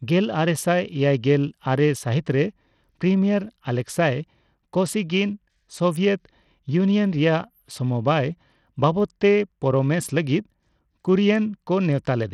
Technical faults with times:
0.00-12.34 Bluetooth SBC compression

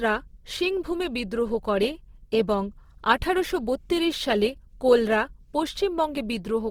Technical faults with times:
0.00-6.71 Opus compression

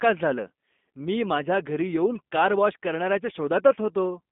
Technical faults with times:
0.00-4.31 G.729 codec

